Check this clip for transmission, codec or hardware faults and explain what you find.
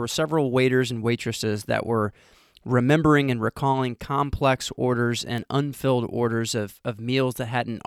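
Two bit error spikes show up in this speech clip, at 5.38 s and 6.50 s. Each is a single corrupted sample. One bit flipped in memory or on a digital link, so the sample value jumped by a power of two and then returned at once. The first peaks at about -17 dBFS, the second at about -23 dBFS. Each is heard as one sharp, broadband tick with no relation to the speech around it.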